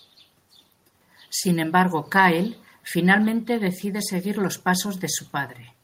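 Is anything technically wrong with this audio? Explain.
No, nothing is technically wrong with this audio.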